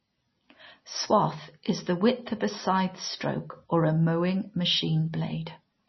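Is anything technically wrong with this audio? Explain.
Yes. Throughout the speech, heavy MP3 compression is likely. Nothing is heard above about 5.9 kHz. Weak frequency lines flicker between frames, giving a watery, swirly sound.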